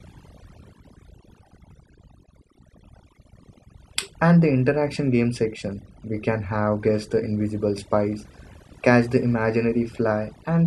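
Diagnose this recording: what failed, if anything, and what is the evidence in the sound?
Overdone noise removal at the processing stage, throughout: pauses drop to near silence with twinkling specks, and the spectrogram shows scattered isolated time-frequency dots.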